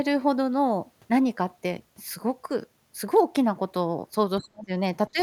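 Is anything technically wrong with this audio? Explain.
Yes. From 4.39 to 4.71 s and again from 5.09 to 5.19 s the speech sinks sharply, by around 40 dB and then around 15 dB. This is speech suppressed in double talk, likely an echo canceller unable to separate the talker from simultaneous loudspeaker echo and ducking the talker.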